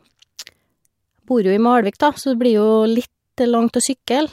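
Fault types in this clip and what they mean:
No faults can be heard.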